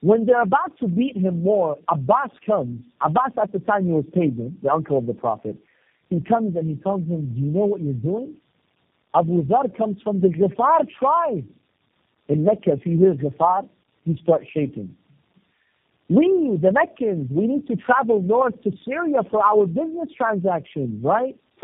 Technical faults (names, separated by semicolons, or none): tandem speech coding